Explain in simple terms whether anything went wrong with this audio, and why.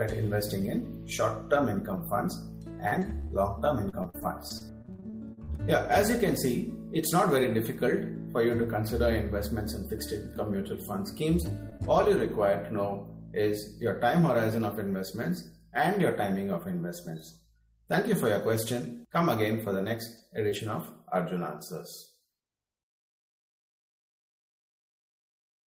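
Between 2.87 and 5.50 s there is repeated packet loss (robotic sound): 18 small pieces of the call went missing, the longest 43 ms, and each was patched by stretching the previous sound. About a sixth of that stretch is patched-in sound, so the audio turns choppy and mechanical instead of just skipping once.

From 11.18 to 12.26 s come scattered short gaps: roughly three brief holes, none longer than about 15 ms, each patched the same way. Unlike the earlier stretch, the holes are few and spaced out, so they pass as quick ticks or smears with clean sound between them.

At 19.12, 20.18, 20.51, 20.55 and 20.69 s, a lost packet was rebuilt from error correction: each 20 ms piece went missing, but a rough backup copy of it arrived in the following packet. There is no hole, just a moment of grainier, noisier sound.

At 20.50 to 20.53 s there is short concealed packet loss: about 20 ms arrived too late and was guessed by continuing the sound before it, then blended back. 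This is a guess rather than a backup copy, so it is heard as a small smear or wobble, not added grain.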